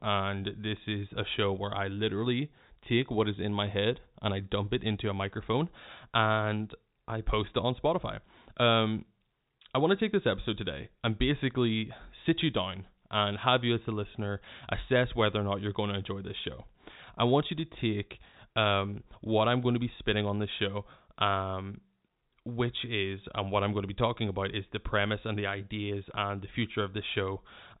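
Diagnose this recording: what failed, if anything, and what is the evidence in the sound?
Nothing failed: the speech runs through a G.711 telephone coding path working as designed, with the band ending at 3.8 kHz as the 8 kHz sampling rate requires and at most the faint quantisation noise that format carries.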